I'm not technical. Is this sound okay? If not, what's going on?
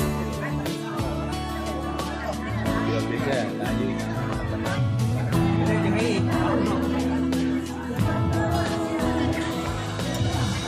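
Yes, nothing stood out as a problem when listening to this sound.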